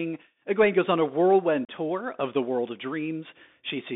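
A speech recording that sounds thin and boxed-in throughout, with nothing above about 3.6 kHz and little below 200 Hz. A grainy hiss sits under the voice, s sounds come out scratchy, and louder bright moments distort. This is the Bluetooth CVSD headset codec, a narrowband one-bit delta scheme consistent with a 64 kbps link, whose adaptive step cannot keep up with fast high-frequency swings. From 1.65 to 1.69 s, just before "tour of the world", the speech drops out for about 37.5 ms with abrupt edges and returns briefly subdued. This is unconcealed Bluetooth headset packet loss: roughly ten short voice packets never arrived and were replaced by silence or an idle pattern rather than being patched over.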